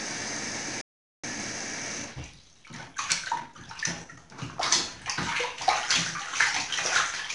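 From start to finish the clip carries 4-bit ADPCM compression. Each sample is stored as a coarse 4-bit step from a predicted value. The step size adapts as the signal changes. The error left behind is a gritty hiss that rises and falls with the level. It is plainly audible on louder passages. Sharp attacks also distort, because the step cannot grow fast enough to follow them.

At 0.81 s the sound stops dead. This is a playback stall. The output stays silent until 1.24 s, a gap of about 421 ms. The sound breaks off in mid-flow and then resumes. The likely cause is that the player ran out of data or its thread was blocked, so nothing reached the output until it recovered.

From 1.24 s to 4.24 s there is a time-compressed catch-up. The player works off the backlog from the stall by cutting out small pieces and cross-fading across the joins. The sound runs about 1.1 times faster than normal, yet its pitch stays unchanged. 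The pace sounds hurried. At 4.24 s the timing settles back to normal speed.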